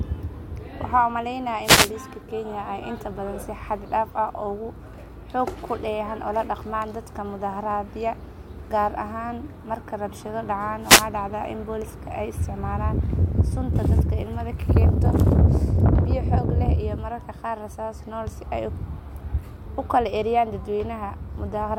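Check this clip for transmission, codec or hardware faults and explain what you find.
Two wireless microphone noise hits, at 1.63–1.92 s and 10.82–11.07 s. Each time, the analogue FM radio link fades as reflected signals cancel, so the receiver's own noise rises over the speech and is heard as a short swish of static lasting about a quarter of a second.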